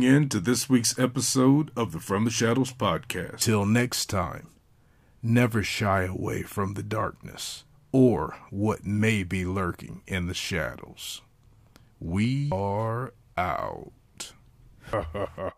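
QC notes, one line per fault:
3.42 s, 12.52 s, 14.93 s, compressed frames skipped: the speech lurches forward, losing about 0.7 s, 0.5 s and 0.5 s. Whole frames of roughly 93 ms each never reached playback.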